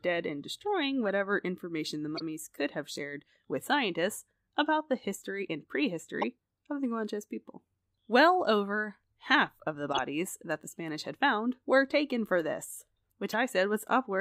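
Short chirps and blips cut through the speech at 1.08 s, 2.16–2.21 s, 6.22–6.24 s, 9.92–9.99 s and 13.30–13.34 s, loudest near 9.9 s. Each is a corrupt frame decoded: flipped bits produced wrong gains and codes, misplacing energy across a few frames.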